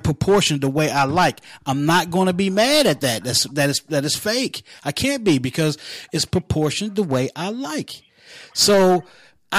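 Nothing technically wrong turns up anywhere in this bit of speech, so there's no problem to point to or explain.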